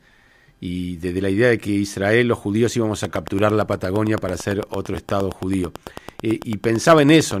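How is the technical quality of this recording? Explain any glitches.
The recording has one clear problem. From 3.05 to 7.32 s there's a train of clicks: about forty evenly spaced ticks, 8.9 per second, some 10 dB over the speech, likely interference or a faulty connection.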